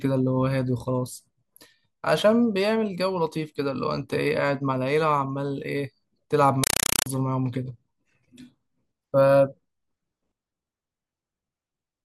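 From 6.64 to 7.06 s the speech gives way to a compressed stream played as audio: loud, chattering static in 4 ms bursts repeating 31.25 times a second, which fits an undecoded AC-3 stream. Unlike random digital noise, it is rigidly periodic, with silent gaps between bursts.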